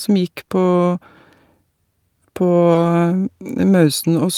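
At 0.45 to 0.49 s and again at 2.73 to 2.77 s the speech shows short concealed packet loss. In each case about 20 ms of audio arrived too late for the decoder, and the receiver bridged the gap by extending the preceding sound, pitched if voiced, noise-like if not, before crossfading back. Each event is heard as a brief smear or wobble, and a quick consonant there can be lost.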